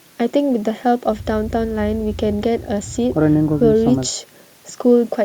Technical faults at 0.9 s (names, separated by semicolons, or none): none